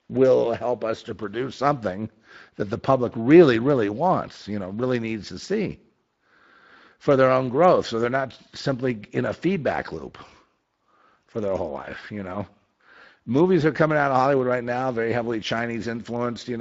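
Throughout, the Speex codec starves its CELP excitation of bits, consistent with roughly 20 kbps, so the speech comes through plainly noisy and hoarse.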